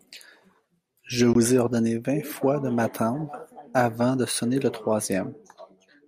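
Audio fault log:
1.33–1.35 s, Bluetooth dropout: the speech cuts out for about 19 ms before "ai ordonné vingt fois", likely from a single packet arriving too late.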